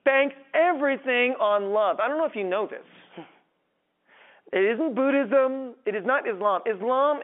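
No technical faults can be heard anywhere in this speech recording. It is carried over G.711 telephone coding, so the sound is held to the narrow telephone band of about 200 Hz to 3.4 kHz.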